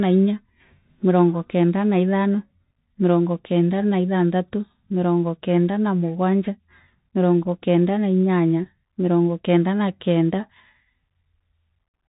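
Throughout the clip, the speech has passed through a Bluetooth CVSD headset codec, the narrowband link that sends a single bit per sample, each one only nudging the waveform up or down by a step that adapts as it goes. The character points to the standard 64 kbps Bluetooth voice stream. Nothing above about 3.8 kHz survives, so the speech is boxed and telephone-thin. Where the step size can't keep pace with loud, bright sounds, they distort, s sounds come out scratchy, and a granular hiss runs underneath everything.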